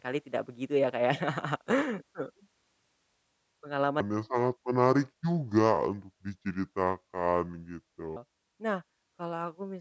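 From 4.01 to 8.16 s, a wrong sample rate slows the speech to two-thirds speed and drops it about seven semitones. Audio recorded at 24 kHz plays at 16 kHz.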